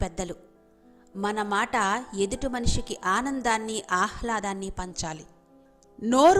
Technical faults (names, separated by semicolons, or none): wrong sample rate